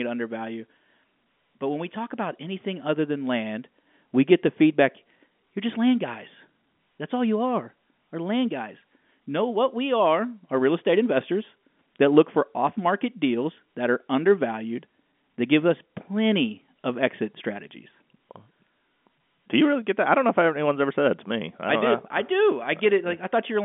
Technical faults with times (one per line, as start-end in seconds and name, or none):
none